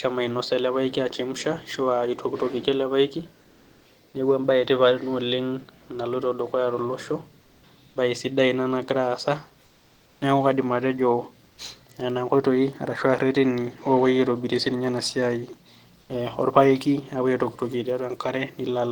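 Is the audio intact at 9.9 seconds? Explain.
No. From 9.67 to 10.21 s, about 540 ms, the real background is replaced by comfort noise: a steady, featureless hiss about 2 dB quieter than the surrounding room sound, which sits about 38 dB below the loud passages. The likely cause is discontinuous transmission such as Opus DTX, where the sender stops transmitting during a pause and the receiver fills the gap with synthetic noise roughly matched to the background.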